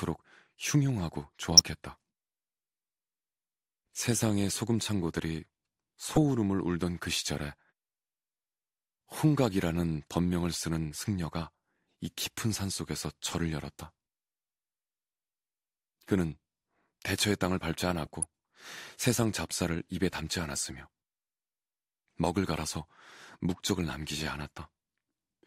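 DAB burbling occurs at 1.41–1.59 s, 6.08–6.22 s and 18.03–18.23 s. Bit errors of a few tenths of a percent slip past error correction, corrupting MP2 samples and scale factors. Wrong samples give short blips of noise in single sub-bands over the speech, and wrong scale factors make sub-bands jump in level for up to a frame.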